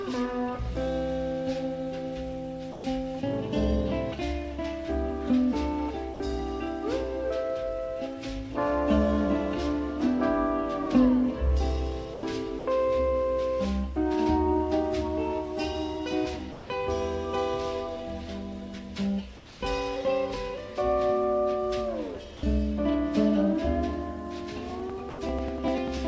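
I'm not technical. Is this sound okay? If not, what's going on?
No. Seven times the sound briefly gives way to a smooth, even hiss before returning: at 2.72, 6.14, 12.14, 12.59, 16.52, 22.37 and 25.10 seconds, each lasting between 60 and 180 milliseconds. This is most likely sound dropped by the voice detector. The sending side mistook real sound for background, stopped sending it, and the receiver filled the gap with hiss. Unlike a glitch or click, the sound itself disappears and the gap is covered smoothly.

From 19.37 to 19.61 seconds, a quiet background stretch is likely comfort noise in place of the background. The natural room sound is replaced by plain, slightly quieter hiss. Nothing meaningful goes missing here, only the background's texture, which is what sets it apart from the dropped sound above.

From 24.6 seconds to the end, periodic USB or driver dropouts produce a steady ticking about every 0.1 seconds. 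Each tick is a tiny slice of sound skipped as the computer stalls. Its clock-like regularity tells it apart from the random-length, hiss-filled gaps.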